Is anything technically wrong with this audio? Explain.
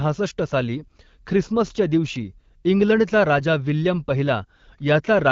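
Yes. There are AMR bit errors at 0.76 to 0.84 s and at 3.39 to 3.42 s. On a weak link, unprotected bits in a few speech frames arrived flipped while the checksum still passed. Excitation pulses, pitch, gain and spectral detail decoded wrongly, so the speech briefly turns hoarse and gargly, worse in the first burst. Around them, the wideband AMR-WB coding sounds clean, which fits a rate near 12.65 kbit/s.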